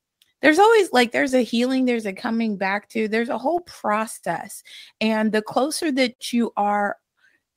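A speech clip with several timing faults. Clock drift between sender and receiver runs through the whole recording. The sender's clock runs roughly 5% slow compared with the receiver's. The jitter buffer keeps draining, so the receiver must keep stretching the sound to stay fed. The result is a faint, uneven drag in the pacing that never quite settles. Repeated timing corrections run from 0.10 s to 7.55 s. The receiver keeps repeating small pieces of sound, always lengthening, never cutting. Playback runs at about 98% of normal speed. Together these edits add roughly a fifth of a second. They are unevenly spaced, so the tempo feels slightly unsteady rather than uniformly slow. Scattered short gaps appear between 1.29 s and 2.51 s. A handful of packets arrived late or not at all, spread across that stretch. Each hole is tiny, the longest only a few milliseconds. The receiver bridged each one by continuing the last sound, so nothing is lost. 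What remains are brief ticks or smears. They cover only a small share of that span. Repeated stalls (stutter) occur between 3.29 s and 4.25 s. Packets came in more slowly than they were played, and the buffer ran empty four times. The receiver held the last sound each time, 90 ms in all, with the longest hold 69 ms. About 9% of that stretch is filled this way. No audio is missing, but the passage drags and stutters. A short stall from a late packet follows at 6.13 s to 6.21 s. One packet was 58 ms late, and the buffer emptied while waiting. The receiver stretched the preceding sound by 58 ms, then resumed at the same point. Nothing is skipped. The effect is a single sound held too long, with a slight buzz or dip in level.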